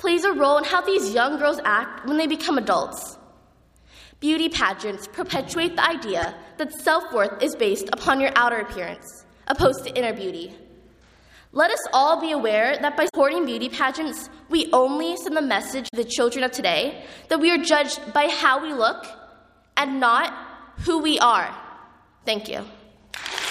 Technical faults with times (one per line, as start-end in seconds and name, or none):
6.22-6.25 damaged data in a compressed stream
13.05-13.15 damaged data in a compressed stream
15.87-15.94 damaged data in a compressed stream